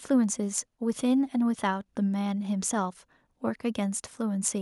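No technical faults are audible.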